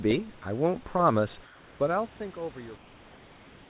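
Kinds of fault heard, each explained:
Comfort noise in place of the background: from 1.44 to 1.8 s, and again from 2.76 s to the end, the pauses lose their natural room background, which sits about 27 dB below the loudest speech, and carry a steady, featureless hiss about 2 dB quieter instead. This likely comes from discontinuous transmission. The sender stops sending when no speech is detected, and the receiver synthesises noise roughly matching the background's spectrum until speech resumes.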